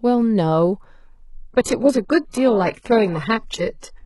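From 1.52 s the adaptive stream switches without a gap to a lower bitrate, fitting low-rate HE-AAC: treble turns synthetic and the spectrogram's upper band abruptly blurs.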